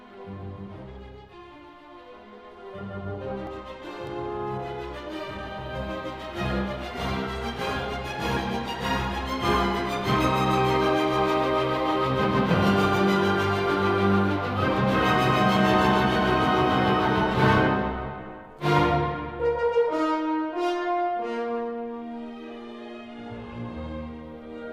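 Nothing stood out as a technical problem on listening.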